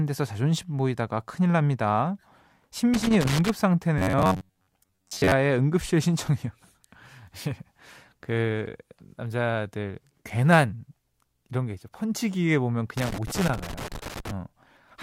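From 2.94 to 3.50 s there is an irregular burst of scratchy crackle: loose connector crackle. A worn or dirty contact is making and breaking as it shifts, chopping the signal on and off, and any DC on the line turns each reconnection into a pop.

Between 3.98 and 5.32 s the speech turns into a rigid, metallic buzz pitched at about 93.8 Hz that still roughly tracks the syllables. This robotic sound from repeated short buffers is likely caused by new audio arriving too slowly, with the playback filling the gaps by looping the last scrap it had. A fixed 93.8 Hz buzz fits a repeated segment of roughly 10.7 ms. For most of this stretch the output is repeats rather than fresh audio, so much of the real speech is skipped.

The same connector crackle returns from 12.97 to 14.31 s. It is again an uneven spray of scratches, and it lasts longer this time.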